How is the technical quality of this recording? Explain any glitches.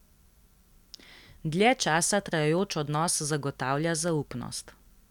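The recording has one clear technical problem: periodic USB or driver dropouts running through nearly the whole speech clip. From 0.09 s to 4.83 s, a sliver of audio, only a small fraction of a millisecond, is skipped every 0.25 s, about twenty times in all. Something stalls the USB link or audio driver on a fixed schedule, and the samples missed during each stall never arrive, so the waveform jumps abruptly. You hear a steady tick four times a second, audible only under the voice. A waveform shows tiny discontinuities at even spacing, and a spectrogram shows thin full-height vertical lines at the same interval.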